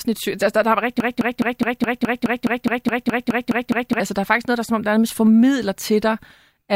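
At 1.00 s the speech locks into a broken-record loop that runs until 4.0 s. A fragment about 209 ms long repeats back to back 14 times, each pass identical, giving a rapid mechanical stutter at roughly five repeats per second. The likely cause is a stalled player, encoder or stream that kept resending the last fragment it held. The speech that should have filled those three seconds is missing, and the clip resumes afterwards without it.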